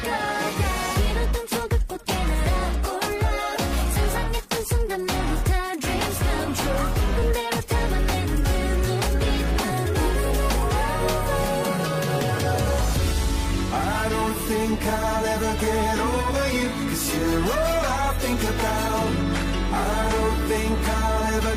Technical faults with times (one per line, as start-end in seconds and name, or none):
7.20-7.22 repeated buffer